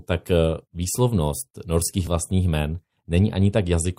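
At 2.07 s, just after "eh výslovnost norských", there is an overlap between stream segments. Two segments claimed the same stretch of time, so about 37 ms of speech was dropped at the join near 2 s. The waveform jumps, and a short skip is heard.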